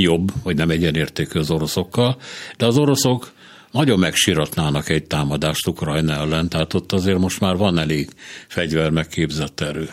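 Nothing here sounds wrong to me: it's a short speech recording, and I can't hear a single technical problem anywhere in it.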